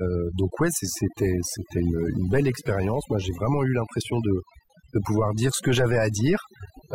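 From start to finish the speech carries overdone noise removal. The denoiser was set so hard that individual frequency bands sitting near its noise estimate get pulled down or switched off, and the quieter parts of the voice vanish with them. Between phrases the background drops to near silence dotted with twinkling specks. Unlike a noise gate, which cuts everything at once, this strips selected bands and leaves isolated tonal fragments behind.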